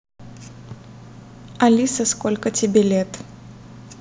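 No technical faults can be heard anywhere in this speech.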